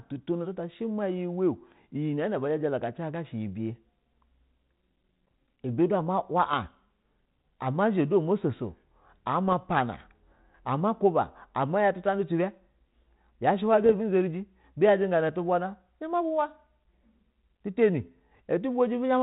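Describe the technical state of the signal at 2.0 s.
At 2.0 s the speech is intact, with only the light coloration of its 32 kbit/s G.726 ADPCM telephone coding and no fault present.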